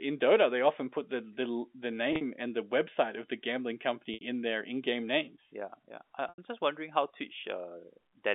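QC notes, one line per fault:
2.13 s, 4.14 s and 6.29 s, packet loss with pitch repetition: gaps of 70 to 90 ms bridged by the last pitch period repeating and fading out. This is heard as a brief buzzy held tone, not the abrupt silence of a plain dropout.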